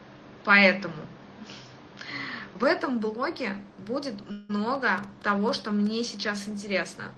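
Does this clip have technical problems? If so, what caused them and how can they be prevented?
Yes. Three faults stand out.

For the first 2.64 seconds the sound is dull and boxy, with nothing above 7 kHz. At 2.64 s it opens up to the wider band of the call path with no gap, and the level shifts by about 5 dB. The likely cause is an input switched to a poorer device that carries its own faint noise floor, roughly 55 dB down. The sudden step in tone is what separates it from the steady band limit of the codec. Lock the input device and disable automatic headset or call-profile switching before recording.

From 4.31 to 4.51 s there is likely a long network dropout. About 0.18 s of audio never arrives, and the receiver fills the gap with a fading continuation of the last sound rather than silence. Because the fill decays and the lost stretch is missing afterwards, this is a true gap, unlike a brief packet-loss smear. 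A steadier network path, or a larger jitter buffer with redundancy enabled, prevents it.

Between 4.75 and 5.87 s there is a train of clicks: roughly seven similar pulses at about 4.5 per second, irregularly spaced and peaking roughly 5 dB above the sound. Their matching shape and their presence in pauses point to interference or a struggling interface, likely, rather than coding noise. Shield the cables and move the audio interface away from other equipment.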